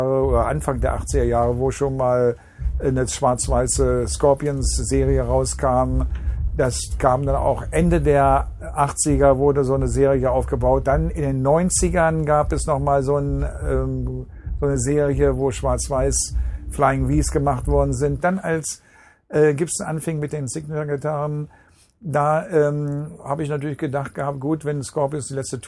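Listening closely, nothing in the audio stood out as a technical problem.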